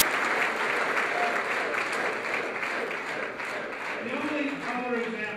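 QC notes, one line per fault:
0.00 s, file tags played as audio: the clip opens with a very brief burst of very loud white static with hard edges, gone almost as soon as it starts. The sound comes from a block of compressed data, here an embedded cover picture, being read out as if it were audio samples. Compressed bytes look essentially random, so the player turns them into very loud broadband noise instead of skipping past the tag.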